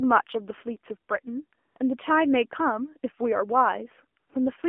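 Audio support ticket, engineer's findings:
Buzzy, synthetic-sounding speech throughout, band-limited to roughly 250 Hz–3.4 kHz with nothing above 4 kHz; codec damage plainly audible. Probable component: AMR narrowband mobile codec (AMR-NB). The pulse-excited vocal-tract model at a low rate smears detail, consistent with the 7.4 kbps mode. Narrow line band from 8 kHz sampling plus telephone filtering.

Brief patches of smooth, steady hiss replacing the real background at 1.68–1.76 s (80 ms), 1.78–1.80 s (20 ms) and 4.20–4.30 s (100 ms), switching in and out abruptly. Probable component: AMR comfort noise. The sender judged these moments silent and stopped sending speech frames. The receiver then synthesised filler noise from a coarse level and spectrum estimate.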